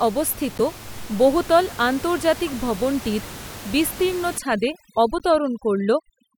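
Right at the start, from 0.58 to 0.61 s, there's a corrupt frame decoded. A couple of damaged compressed frames got played anyway, so misread gains and codes throw energy into the wrong bands, and you hear a short, fairly loud squeaky blip.

From 4.38 s to the end, the overdone noise removal kicks in. The noise reducer is set so hard that it mutes any band sitting near its noise estimate. The room noise, normally about 16 dB under the speech, drops and breaks up into twinkly specks.

Inside that stretch, at 5.19 to 5.21 s, there's a second corrupt frame decoded, again about two frames. It's a much fainter chirp this time.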